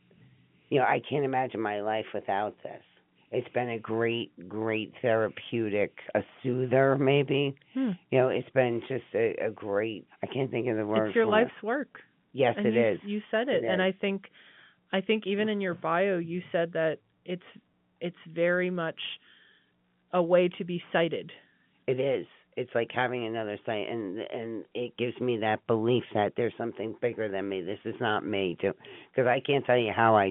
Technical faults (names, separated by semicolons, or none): none